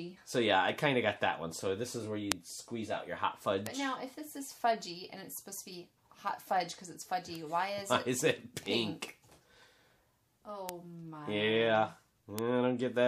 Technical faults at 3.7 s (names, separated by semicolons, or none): bit error spike